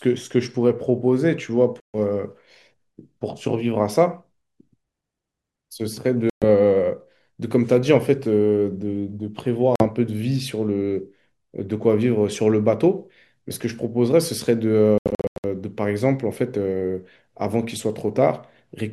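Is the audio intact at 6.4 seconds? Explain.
No. The speech drops out from 6.30 to 6.45 s, so 6.4 s falls inside a silent gap. The sound cuts off and later returns. When it resumes, the speech has moved on, as if it kept playing through the hole. This is likely a Bluetooth dropout. Audio packets reached the headphones too late and were discarded. The missing stretch of about 120 ms fits a short run of lost packets.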